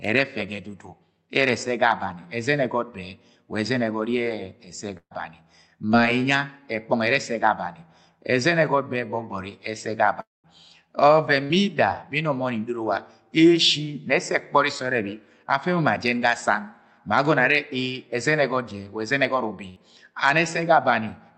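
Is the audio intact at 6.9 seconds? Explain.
Yes, the speech at 6.9 seconds is intact, with nothing there beyond the normal sound of the Opus call path and its top end limited to about 8 kHz.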